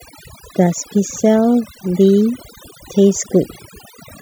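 From the start and for the whole clip, the speech carries overdone noise removal. A noise reduction stage was set far too aggressively, so any frequency band sitting near its noise estimate is pulled deep down or gated off entirely, and the softer parts of the speech are removed along with the noise. The background drops to near silence dotted with twinkling, chirpy specks.

Between 0.78 s and 3.70 s there is a regular click roughly every 0.97 s, about four in all, each a short pop cut into the running speech. These are clock drift buffer slips. The cause is likely two devices each running on its own clock. One runs fast relative to the other by something on the order of several hundred parts per million. The buffer between them gradually fills or drains until a small block is dropped or repeated, which fits a slip of a few dozen samples at each event.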